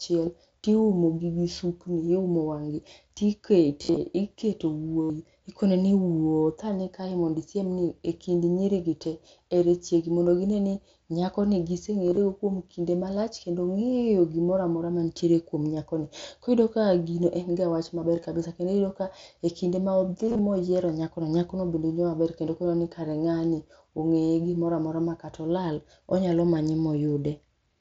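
Concealed Bluetooth headset packet loss at 3.83–3.97, 5.01–5.10, 12.07–12.17, 18.16–18.25 and 20.27–20.39 s: headset packets dropped and the phone repeated recent waveform, causing buzzy held tones and warbles over mSBC's 8 kHz-limited speech.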